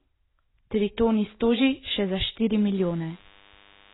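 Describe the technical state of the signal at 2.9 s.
DECT cordless phone buzz is present at 2.9 s, within a span that starts at 2.76 s and runs to the end of the clip at 3.94 s. A nearby DECT handset or base transmits a brief radio burst every 10 ms, and the audio circuitry demodulates that pulsed energy into sound. The result is a thin, steady 100 Hz buzz rich in harmonics, sitting about 30 dB below the speech. It is faint but constant under the talker.

AAC compression damage also affects this moment, as it does across the whole clip. Nothing is heard above 3.9 kHz, so the speech sounds dull and boxy, and the remaining band has the smeared, warbling, fizzy texture of heavy coding, most obvious on sibilants and held vowels. The likely cause is AAC-LC coding at a very low rate, which fits a bitrate around 16 kbps. At that rate the encoder cuts the upper spectrum and quantises what remains too coarsely.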